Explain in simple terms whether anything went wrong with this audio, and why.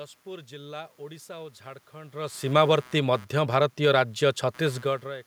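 A faint buzzy, scratchy noise runs underneath the speech for the whole clip. This is computer activity noise: when the computer's processor, graphics card or mouse work harder, the changing load disturbs the electrical ground the audio circuit shares, and that leaks in as a rapid pulsing, here around 150 times a second, sitting well below the voice. Unlike a steady mains hum, it rises and falls with what the computer is doing, not with the speech. The changes in loudness near 2 and 5 seconds are just the talker moving relative to the microphone.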